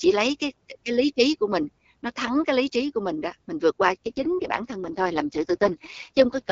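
A speech clip on an AMR-WB (HD Voice) call shows an AMR rate drop from 3.94 s to the end. The voice turns rougher and more synthetic, with no gap or band loss, consistent with the link stepping down from 12.65 to 6.6 kbit/s under weak radio conditions.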